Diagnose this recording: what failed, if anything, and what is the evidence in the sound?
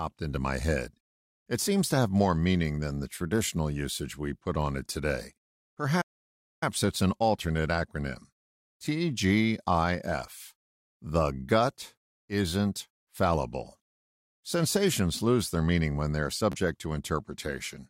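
At 6.01 s the speech cuts out abruptly and stays silent until 6.63 s, a gap of about 0.6 s, then resumes with "it's an alternate acronym". This playback stall was likely caused by the player's buffer running dry or its output thread blocking.

Just after "meaning when they are", at 16.52 to 16.55 s, there is a brief buzzy repeat lasting about 30 ms. This Bluetooth stutter comes from the wireless link: late or lost packets, which fits roughly two packets, were covered by replaying the last buffered slice.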